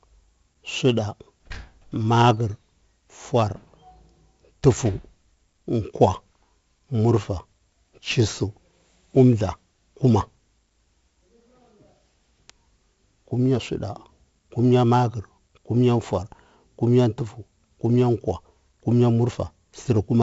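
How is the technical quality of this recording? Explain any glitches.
The recording is heavily degraded throughout by 4-bit ADPCM compression. Each sample is coded as a coarse step from a prediction, which fits 64 kbps at a 16 kHz rate. The result is gritty hiss tracking loud speech and smeared attacks. A spectrogram shows broadband noise hugging the speech energy and nothing above 7.7 kHz.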